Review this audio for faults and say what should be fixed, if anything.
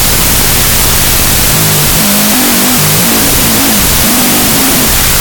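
Wrong sample width is present throughout. Loud broadband noise buries the original sound, which plays at half speed and an octave low. This fits 32-bit float data read as 16-bit integers. The waveform looks like a dense, loud block, and the spectrogram is flooded with noise across all frequencies. To prevent it, take the sample format from the file header or stream metadata rather than assuming it.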